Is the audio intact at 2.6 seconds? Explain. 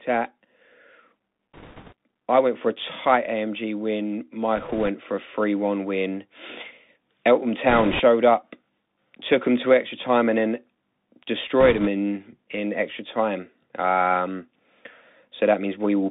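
No. At 2.6 seconds, as throughout, the speech passes through a Bluetooth CVSD headset codec, limited to about 200 Hz to 3.7 kHz, with granular hiss and scratchy sibilants from its 64 kbps one-bit slope coding, unlike clean band-limiting.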